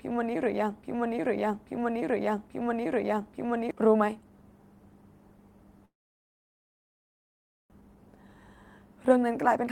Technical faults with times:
0.00-3.71 broken-record loop
5.85-7.74 long network dropout
7.81-8.42 jitter buffer speed-up
9.00-9.71 jitter buffer speed-up

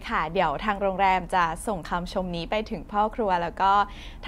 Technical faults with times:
none

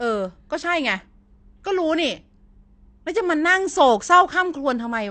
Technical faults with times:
0.00-5.11 AAC compression

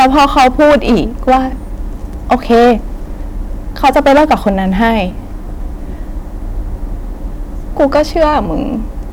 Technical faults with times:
0.00-1.39 hard clipping
2.31-2.73 hard clipping
3.84-5.00 hard clipping
7.80-8.38 hard clipping

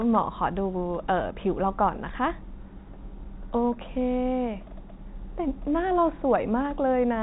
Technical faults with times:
none

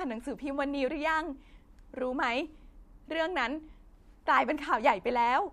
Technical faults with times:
none

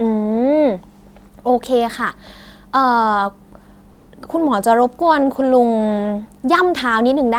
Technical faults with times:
3.91-4.03 comfort noise in place of the background

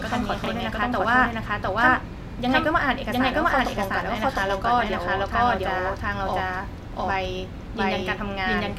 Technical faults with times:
0.00-8.78 doubled audio track
0.44-0.48 chunks out of order

